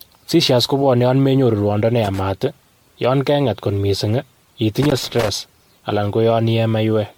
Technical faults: generation loss; loose connector crackle

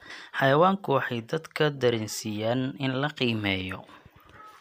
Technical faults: none

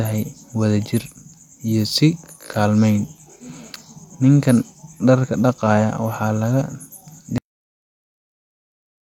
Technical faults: cut-off end

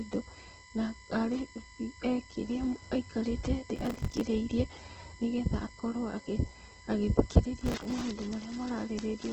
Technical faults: USB whine; Opus compression; processor overload crackle

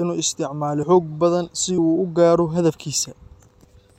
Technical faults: audio missing between chunks

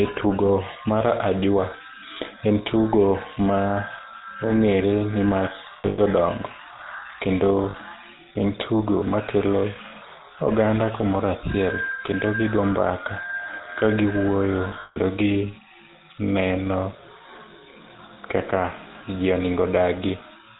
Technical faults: GSM full-rate codec; lost GSM frames

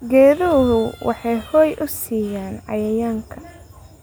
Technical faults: none

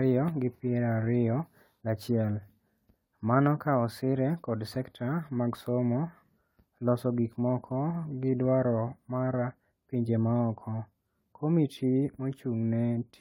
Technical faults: generation loss

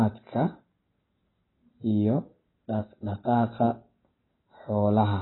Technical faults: AAC compression

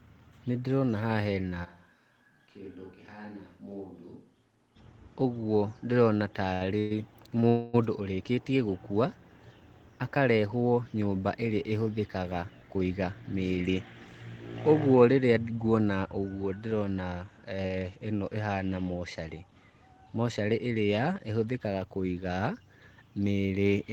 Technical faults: switch to a distant microphone; short stall from a late packet; call audio freeze; jitter buffer speed-up

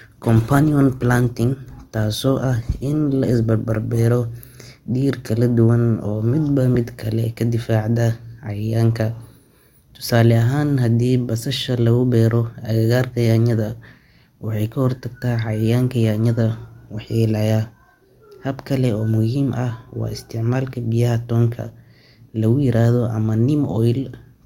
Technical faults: adaptive stream starting at a low bitrate

